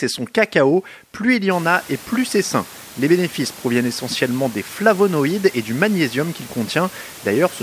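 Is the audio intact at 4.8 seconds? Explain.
Yes, the audio is intact at 4.8 seconds, with only the room's own background noise sitting about 24 dB below the speech.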